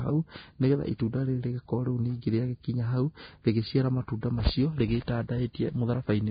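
Throughout, nothing sounds above 4.9 kHz. The upper range is hissy and grainy. This fits heavy, likely Vorbis compression near 16 kbps.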